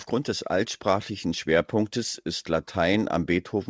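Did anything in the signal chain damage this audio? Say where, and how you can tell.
Yes. Automatic gain rising, from 0.46 s to the end, in call processing: speech and background swell together as the AGC, finding the input too quiet, steadily raises gain.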